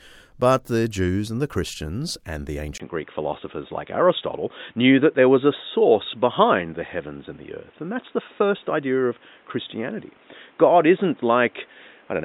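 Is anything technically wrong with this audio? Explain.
Yes. From 2.78 s, right after "and the", to the end, the input likely switched to a poorer device. After a 20 ms gap, the band stops at 3.8 kHz and a new noise floor appears about 35 dB down, with no real change in level. The sound turns dull and boxy. A spectrogram shows the top cut flat, and the waveform shows a brief dropout.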